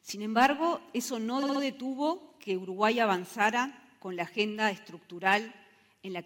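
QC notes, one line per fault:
1.42–1.61 s: repeated frames. A 64 ms block replays three extra times, giving a stutter and adding 192 ms.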